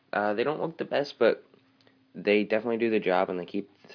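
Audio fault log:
No fault can be heard anywhere in the clip. There is nothing to log.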